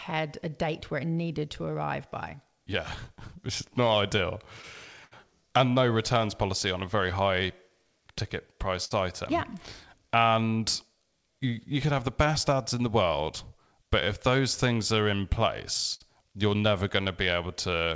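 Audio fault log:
throughout, clock drift between sender and receiver: the sending side's clock runs roughly 5 percent slow relative to the receiver, so packets arrive a little slower than they are played out. The jitter buffer keeps drifting toward empty, and the receiver has to pad the sound to stay fed. The result is a slightly dragging tempo with small, irregular timing hiccups, heard over a G.722 call path at 64 kbps, which has nothing above 8 kHz.
0.14 to 17.86 s, repeated timing corrections: to cover the slow sender, the receiver repeatedly stretches or repeats short pieces of audio. All the edits go the same way, lengthening the sound, and together they add about half a second over the stretch. Effective playback runs at 97 percent speed. The spacing is uneven, so the speech has a faintly unsteady pace rather than a uniform slowdown.
3.04 to 5.13 s, scattered short gaps: around five packets in this span were lost or arrived late, one at a time. 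The receiver patched each hole by extending the preceding sound, about 100 ms of fill in total, with the longest patch around 70 ms. Nothing is actually dropped. About 5 percent of the span is concealed, heard as brief smears or ticks within otherwise continuous speech.
8.85 and 15.94 s, short stall from a late packet: at each point a packet was not there on time and the jitter buffer briefly ran dry. The receiver held the last sound for 58 ms until the packet turned up, then carried on from where it left off. No audio is lost, but one sound lingers slightly too long with a slight buzz or dip, and playout delay grows by 58 ms each time.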